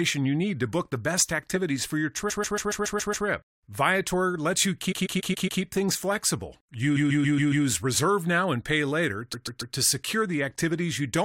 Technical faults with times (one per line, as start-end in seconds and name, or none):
2.29-3.26 repeated frames
4.91-5.61 repeated frames
6.95-7.65 repeated frames
9.32-9.74 repeated frames